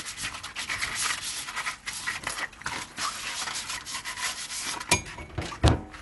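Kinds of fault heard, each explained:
Dolby Digital compression: The whole clip has the dull, band-limited character of a low-rate transform codec, most likely Dolby Digital (AC-3) coding. Nothing is present above about 11.4 kHz, and the codec damage is plainly audible. The encoder has cut the top of the band and left many frequency lines with no mantissa bits. The decoder refills those lines with dither noise, which gives rough, fluttering grain around tonal parts of the sound. This points to a bitrate around 64 kbps.
Integer overflow: Two violent cracks occur, at 4.92 s and 5.68 s. At each one a sample value went past the largest integer the format can hold. Instead of being limited, it wrapped around to the opposite sign, so the waveform jumps across the full range in a single step. The first event is driven about 6 dB over the limit, and the second sits right at it. Both sound much sharper and harsher than ordinary clipping.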